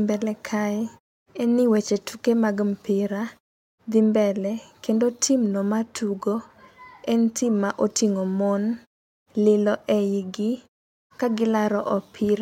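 Nothing in this speech clip stands out as a technical fault, and the way the background drops away in the pauses and comes back for the next phrase is simply the quiet gaps being muted as intended.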